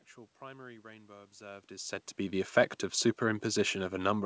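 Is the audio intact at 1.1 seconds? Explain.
Yes, the audio is intact at 1.1 seconds, with no dropout, glitch or distortion at that point.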